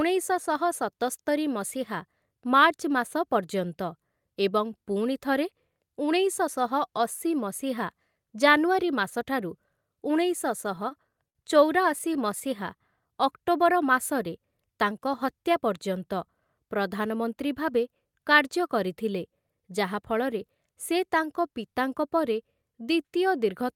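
From 10.61 to 11.37 s the speech hits repeated stalls (stutter). The jitter buffer ran dry four times and the receiver stretched the last sound across each wait, about 84 ms in all, the longest 50 ms. Nothing is lost, which sets it apart from packet loss: the sound catches and drags rather than dropping out. From 11.99 to 12.43 s four shorter stalls follow, 43 ms filled, none longer than 13 ms, heard as small hitches.

From 12.77 to 13.09 s, just before "ଅକ୍ଟୋବର ମାସରେ ତାଙ୍କ", a jitter buffer slow-down rebuilds the reserve by repeating pitch periods, adding 40 ms. The speech runs at 90% speed with its pitch intact. Unlike the stalls, the lengthening is spread over many repeats, so the sounds are drawn out.

From 15.07 to 15.62 s, after "ଅକ୍ଟୋବର ମାସରେ ତାଙ୍କ", a jitter buffer speed-up trims a few tens of milliseconds of pitch periods to cut excess delay. The speech runs at 106% speed and sounds slightly hurried, yet keeps its pitch, which rules out a simple playback-rate error.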